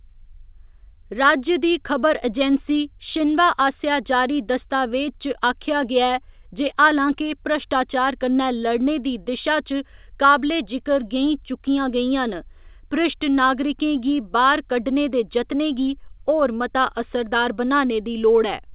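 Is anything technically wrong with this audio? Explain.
No, there is no fault in this speech recording; it passed through a WebRTC call path whose codec sounds like G.711 A-law at 64 kbps, with the expected band limit of nothing above 4 kHz.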